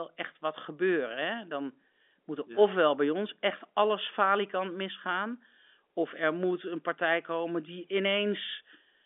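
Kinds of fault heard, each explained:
Nothing here stands out as a fault; it's just ordinary speech with nothing to flag.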